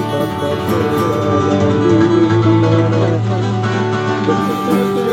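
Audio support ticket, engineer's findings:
Doubled audio track, whole clip: every sound heard twice, second copy about as loud as the first and trailing by roughly a third of a second. Copy is clean and full-band, no decay or room tone. Likely cause: same feed captured twice, once through a slower path, both summed into the mix.

Digital radio blending to analogue, 1.06 s to 4.65 s: faint hiss rises well below the programme, and level shifts by about 2 dB. Hybrid receiver lost the digital stream and cross-faded over 316 ms to the FM broadcast, then faded back.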